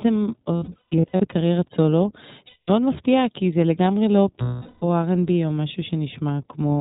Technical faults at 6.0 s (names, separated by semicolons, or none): iLBC codec